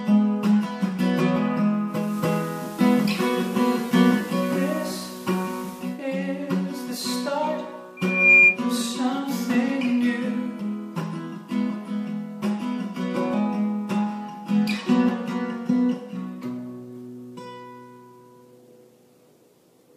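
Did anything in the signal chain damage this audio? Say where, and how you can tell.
Yes, two separate problems. First, at the reception end, there's digital radio blending to analogue from 1.85 to 6.03 s. The receiver lost the digital stream and cross-faded over about 0.34 s to the station's FM feed, then back. You can tell from the hiss floor that appears, roughly 25 dB under the programme, and a level shift of about 1 dB as the FM path takes over.

Second, a loudspeaker feedback squeal from 7.97 to 8.59 s, which is an acoustic loop in the analogue side of the chain. A mic was hearing the speaker it fed, and at 2.4 kHz the loop gain went past one. That single tone swells on its own over about a third of a second to around 10 dB above the programme. It then stops.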